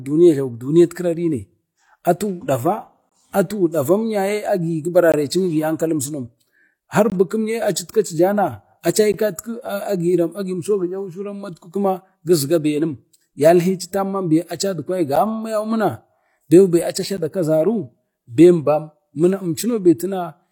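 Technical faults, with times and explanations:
3.09–3.12 s, 5.12 s, 7.10–7.12 s, 9.12 s, 15.16 s and 17.17 s: gap between stream segments. The timestamps of consecutive 2-second segments fail to meet, so the player pads each seam with silence. Speech drops out abruptly for about 10 to 21 ms, with hard edges on both sides, and then resumes intact. The holes fall at intervals of the segment length, and the later ones are shorter, near 10 ms.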